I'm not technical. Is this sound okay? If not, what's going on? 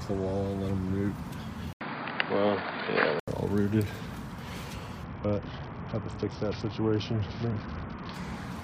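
No. There are two separate problems.

From 1.73 to 3.28 s the sound suddenly turns dull and boxy, as if it came from a cheaper microphone. Nothing above about 4.8 kHz gets through. A brief gap of about 80 ms marks the switch. The loudness shifts a little, and a faint new background noise appears. This is likely an input switched to a poorer device, where the recording jumped to a different, lower-quality microphone partway through.

From 5.04 to 8.14 s a different fault appears: a Bluetooth SBC bit pool drop. The wireless link got crowded, so the phone squeezed the audio into far less data to keep it playing. The highest sounds fade away. A rough, gritty texture creeps in over everything. It lasts about three seconds and clears up shortly before the clip ends.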